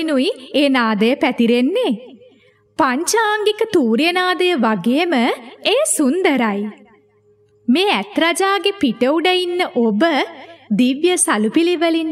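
No technical faults are audible.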